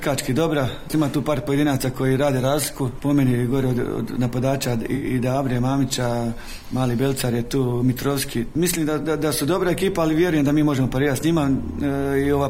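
At 4.95 s the sound turns briefly smeared and noisy for about a tenth of a second, until 5.05 s, the mark of AAC frame loss with concealment. Roughly 64 ms of coded audio went missing, which fits three lost AAC frames, and the decoder rebuilt the gap from the last good spectrum. A plain dropout would leave silence or a click; here the gap is filled with a blurred, phasey copy of the preceding sound.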